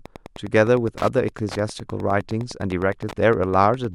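Wi-Fi interference runs through the whole speech clip. A nearby Wi-Fi radio's beacon, repeating every 102.4 ms, is being rectified by the audio circuit. It sounds like a steady ticking about ten times a second. The ticks sit roughly 20 dB below the speech.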